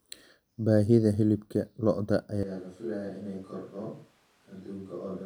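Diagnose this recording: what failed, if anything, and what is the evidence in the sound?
Right after "hilibka lo'da", at 2.43 s, the speech abruptly turns roomy, hollow and thin in the bass, drops by about 10 dB, and gains background noise roughly 30 dB below the speech until the end. At the capture stage, this likely reflects a switch to a distant microphone after the close microphone's feed was lost.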